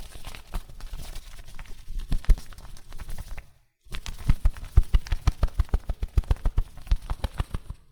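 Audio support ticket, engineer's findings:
Clock drift between sender and receiver: sender clock about 2% slow. Jitter buffer drains steadily, giving small uneven timing hiccups through the whole clip.

Repeated timing corrections, 3.46 to 7.66 s: receiver repeating short pieces to cover the slow feed, running at 98% speed. Adds roughly a tenth of a second.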